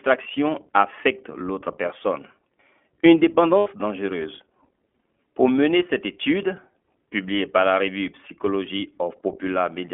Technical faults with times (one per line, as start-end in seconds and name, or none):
0.00-9.93 iLBC codec
3.58-3.68 lost iLBC frames